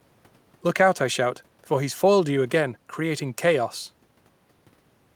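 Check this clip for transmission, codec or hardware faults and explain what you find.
No faults turned up in checking the clip, so there is nothing to explain.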